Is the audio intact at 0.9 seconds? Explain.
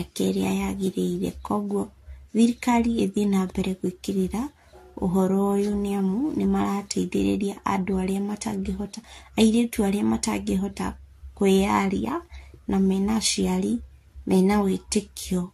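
No, at 0.9 s the speech carries generation loss that runs through the whole clip: swirly, hollow, smeared consonants, nothing above 14 kHz, likely from repeated re-encoding, worse than one low-bitrate AAC pass would sound.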